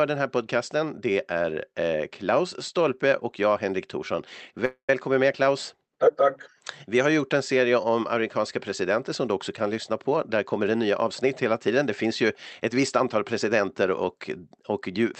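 Speech carried over an Opus call link shows a call audio freeze from 4.65 to 4.90 s. The last sound stretches into a fading buzz that ends in about 110 ms of near-silence, likely because delayed packets drained the jitter buffer. Unlike a dropout, speech then resumes exactly where it stopped, so nothing is lost, only delayed. From 10.08 to 13.16 s a jitter buffer speed-up runs the speech about 7% fast by trimming pitch-period slices, around a fifth of a second in all. It sounds hurried, yet pitch stays unchanged, unlike simple resampling.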